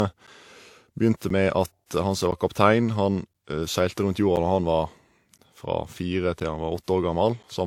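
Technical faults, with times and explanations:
Throughout: transcoding between lossy codecs. Two different sets of codec smearing are heard together, with nothing above 18.4 kHz, likely from an HE-AAC stage followed by WMA.
0.27 to 7.44 s: periodic USB or driver dropouts. About ten-millisecond silent gaps every 1.02 s tick only under signal, unlike codec artefacts, which are continuous.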